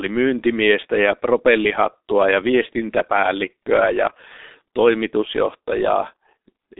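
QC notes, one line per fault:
Throughout, G.723.1 codec: heavy coding damage leaves the speech muffled and hoarse with blurred consonants. It sits in a phone band of 250 Hz to 3.7 kHz with nothing above 3.8 kHz, which fits a bitrate near 6 kbit/s and slow 30 ms frame updates.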